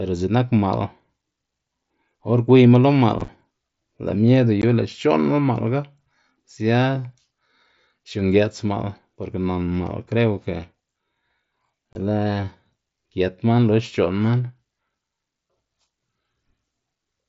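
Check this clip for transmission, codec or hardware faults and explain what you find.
There's unconcealed Bluetooth headset packet loss: around 3.19 to 3.28 s as scattered dropouts, then at 4.62 s and 11.93 s. Lost headset packets were replaced by silence or an idle pattern, leaving abrupt holes in the wideband mSBC speech.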